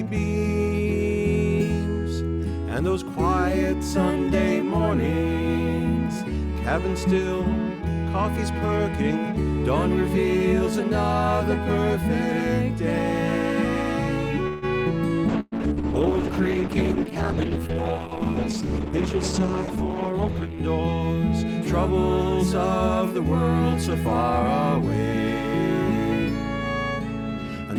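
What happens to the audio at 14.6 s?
From 14.47 to 14.65 s the last sound stretches into a fading buzz, then resumes where it stopped: a call audio freeze, likely from delayed packets emptying the jitter buffer.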